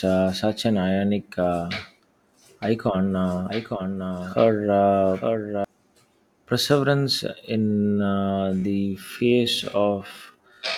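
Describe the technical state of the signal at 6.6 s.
No fault is present at 6.6 s: the speech runs through that point intact, with no dropout, clipping, glitch or other defect.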